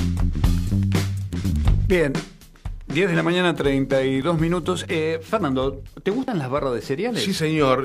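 The audio jumps abruptly at four points: 1.52, 4.22, 5.42 and 6.28 s. Each jump is a sudden skip forward, with no gap of silence. The first three lose about 20 ms each. The one at 6.28 s loses roughly twice that. These are likely dropped buffers (overrun), where the recording software fell behind and a chunk of samples was overwritten before capture. The sound on either side then butts straight together.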